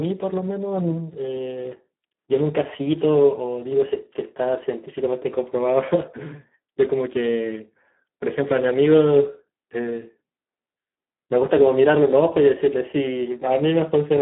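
Throughout the speech, Speex codec damage is heavy: the noisy, hoarse texture points to a low bitrate near 8 kbps starving the CELP excitation. The audio sits in a narrow 200 Hz to 3.5 kHz line band, with nothing above 3.8 kHz.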